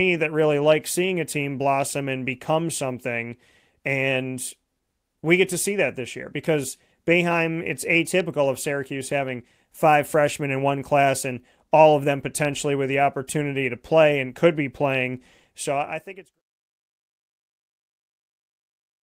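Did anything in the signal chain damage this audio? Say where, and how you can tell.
No, nothing in the chain damaged this speech recording, and the smooth fade-out that begins around 15.5 s and finishes at 16.42 s is a deliberate edit with no click or hard edge.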